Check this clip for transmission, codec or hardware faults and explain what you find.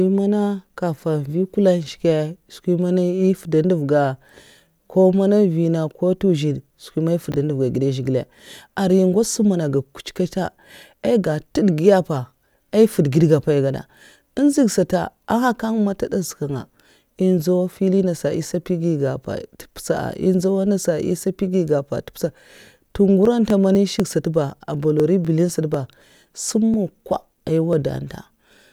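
Two faults are present in this speech.

From 7.32 to 7.36 s, chunks out of order: one 20 ms chunk plays one slot late, producing a jumbled blip; the waveform shows three abrupt discontinuities.

From 23.25 to 28.48 s, periodic USB or driver dropouts: about twenty tiny skips, each around a millisecond, repeat every 0.249 s, heard as regular ticks and seen as evenly spaced vertical lines on a spectrogram.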